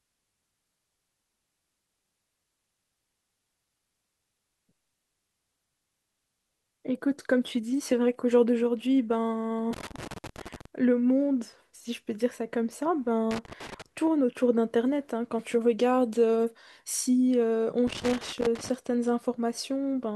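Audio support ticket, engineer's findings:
Loose connector crackle, 9.73–10.65 s, 13.31–13.82 s, 17.87–18.69 s: irregular scratchy bursts over the speech. Worn or dirty contact, probably a cable plug, intermittently breaking signal.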